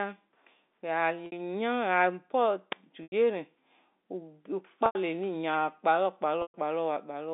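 Packet loss with pitch repetition interrupts the speech at 1.26–1.32 s, 3.03–3.12 s, 4.86–4.95 s and 6.42–6.54 s, with 60 to 120 ms missing. The receiver loops the last pitch cycle, giving a brief buzzy hold. On a waveform, identical repeating periods taper away, and the spectrogram shows frozen, flat harmonics.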